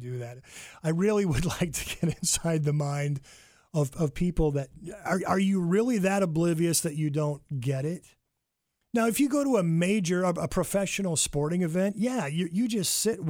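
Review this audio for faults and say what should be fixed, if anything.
Nothing stood out on listening, so there is nothing here that needs fixing.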